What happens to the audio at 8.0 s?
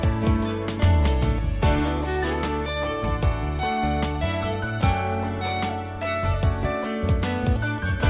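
Nothing goes wrong at 8.0 s: the audio carries straight through that moment with no dropout, glitch or break, still showing the narrow telephone-style band of the call path with nothing heard above 4 kHz.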